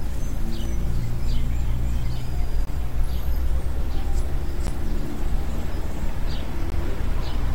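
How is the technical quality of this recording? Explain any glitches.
The recording has two technical problems: a constant DC offset and four short dropouts from gaps between stream segments.

The DC offset runs through the whole clip. The waveform sits shifted off the zero line by a steady amount, so it wastes headroom. It is inaudible, but a spectrogram shows a constant band of energy at the very bottom, near 0 Hz.

The gap between stream segments occurs at 0.65 s, 2.65 to 2.67 s, 4.67 s and 6.70 to 6.72 s, roughly every 2 seconds, which fits 2-second segments. Timestamp mismatches leave holes of about 3, 19, 13 and 19 ms that the player fills with silence. Each one is a hard-edged flat stretch in the waveform and a thin vertical blank strip on a spectrogram, heard as a brief interruption.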